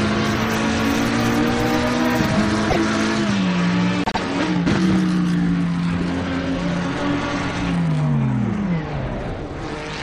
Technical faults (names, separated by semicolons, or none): repeated frames